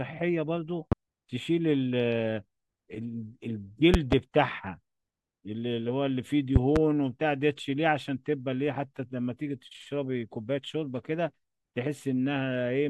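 Loud pops, one at 0.92–0.95 s and double pops at 3.94–4.15 s and 6.56–6.79 s, rise roughly 20 dB above the speech, likely from electrical voltage spikes. Unlike dropouts, the speech continues underneath.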